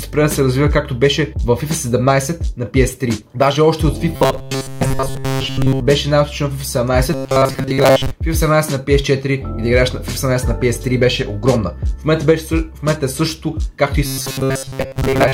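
Robotic sound from repeated short buffers appears at 4.16 to 5.81 s, 7.13 to 8.11 s, and 14.06 s to the end of the audio. In each stretch the sound collapses into a rigid metallic buzz at 134 Hz, with most of the material seemingly replaced by repeats. That pitch fits a loop of roughly 7.5 ms being replayed because fresh audio arrived too slowly, which is the likely cause, while the skipped audio is lost.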